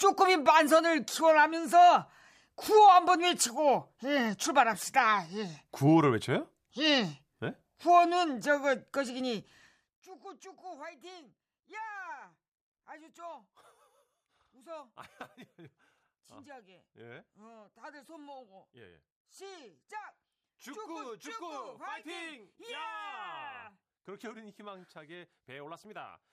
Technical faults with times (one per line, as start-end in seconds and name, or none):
none